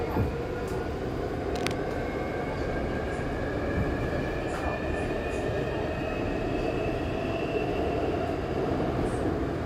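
From 1.55 to 1.75 s, a burst of cable scratch noise rides over the sound for about a fifth of a second, sitting only a little below its level. The rough, dense rustle likely comes from a worn lead, connector or control being moved, with the contact resistance fluctuating quickly. Unlike a single click or pop, it is a cluster of uneven crackles, and unlike steady hiss it lasts only a moment.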